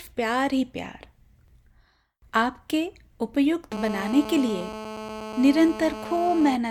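A hard, raspy GSM phone buzz cuts into this speech clip from 3.72 s to 6.56 s, repeating at about 217 Hz with a dense stack of harmonics, roughly 12 dB below the speech. A nearby 2G handset on a call transmits in bursts, and the audio circuitry rectifies them into this steady, signal-independent noise.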